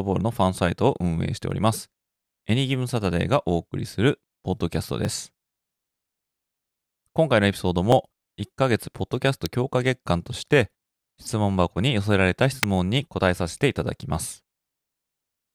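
Single sharp clicks cut through the speech at 1.51, 5.05 and 7.92 seconds, each a thin instant tick. These are likely dropped samples: under a millisecond of the stream goes missing, so the waveform jumps abruptly to a later value. At 9.46 and 12.63 seconds, sharp snaps sit on top of the speech. This sounds like an electrical switching spike, likely a nearby switch, motor or static discharge arcing briefly and being picked up by the audio line.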